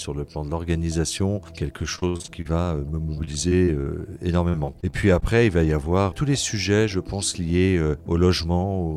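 There are three bursts of repeated packet loss (robotic sound) in this audio, at 1.95–2.47 s, 3.15–4.03 s and 4.49–5.23 s. In each, short chunks keep going missing, with the longest hole around 57 ms in the first burst, and the decoder patches them by stretching the last bit of sound. That gives the choppy, robotic texture. The first burst is the worst, with about 40% of it being filler rather than real audio.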